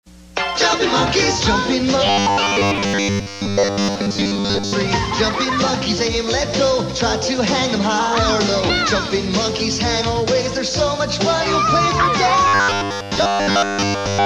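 From 2.07 to 4.74 s, the sound turns into a rigid, metallic buzz at 100 Hz. That is robotic sound from repeated short buffers. A 10 ms slice likely repeats while most new audio is skipped. From 12.48 to 14.26 s, everything is repeats.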